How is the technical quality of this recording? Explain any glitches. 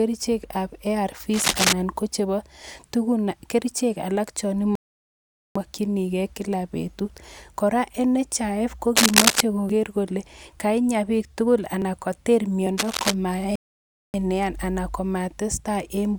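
The recording has several distinct technical problems: three bursts of scratching noise, two playback stalls and three small skips.

Cable scratch noise appears at 1.3–1.7 s just before "ko chebo", at 8.96–9.41 s and at 12.77–13.14 s. It is most likely a worn connector or cable being disturbed, with its contact resistance fluctuating quickly. You hear a rough, rustling crackle. The first burst is roughly as loud as the speech, the second a little louder and the third a little quieter. A spectrogram shows ragged broadband smears, and the waveform shows jagged, irregular spikes.

Two rebuffering stalls occur, at 4.75–5.56 s and at 13.56–14.14 s. Each time, the player ran out of downloaded audio and waited for more. The speech cuts to dead silence and then resumes from exactly where it stopped, so nothing is lost. The stalls add 0.80 s and 0.58 s respectively. The waveform shows a flat line, and the spectrogram shows a blank vertical band with clean edges.

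Dropped buffers (overruns) happen at 9.69 s, just before "kole kainya biik tugul", at 11.82 s right after those words and at 12.67 s. Likely the software failed to collect its samples before the hardware overwrote them, so the audio on either side is spliced together directly. The first skip loses around 40 ms and the others around 10 ms each. Each is heard as a small jump forward. The waveform shows a sudden discontinuity, and the spectrogram shows a thin vertical line.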